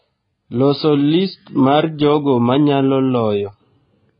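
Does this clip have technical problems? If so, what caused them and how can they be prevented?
Yes. AAC compression damage runs throughout: nothing above 5 kHz, with dull, smeared, warbling speech. This is likely AAC-LC at a low bitrate, around 16 kbps. Prevent it by encoding at a higher bitrate.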